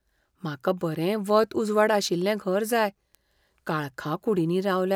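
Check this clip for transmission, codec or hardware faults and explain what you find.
One fault is present: word clock ticks. From 0.77 to 4.33 s, about four sharp ticks arrive roughly once a second. The receiver's clock drifts roughly 20 ppm from the sender's, so one sample slips at each crossing.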